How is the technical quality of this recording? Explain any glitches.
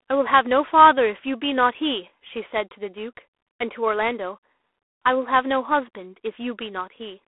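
The recording is narrowband telephone-grade speech with plainly audible coding damage throughout, consistent with G.726 ADPCM. For the whole clip, nothing reaches above about 3.8 kHz, and the usable band sits roughly between 300 Hz and 3.5 kHz, so the speech sounds boxed-in and dull. The coder sends only a few bits per sample describing how each sample differs from a running prediction. That coarse quantisation leaves a harsh, rasping hiss that rises and falls with the speech level, which fits the 24 kbit/s mode.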